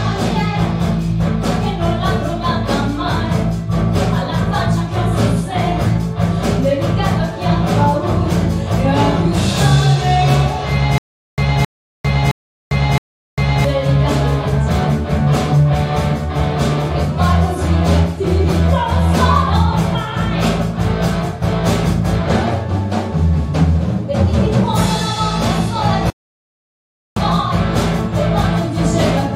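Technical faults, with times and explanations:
10.98 to 13.65 s, stutter with silent gaps: a 267 ms burst repeats four times, with 399 ms of dead silence between, likely a stalled stream replaying its last fragment, so that stretch is lost.
26.10 to 27.17 s, rebuffering stall: the sound drops to silence for about 1.06 s, then picks up exactly where it stopped, so nothing's missing, just time added while the player waited.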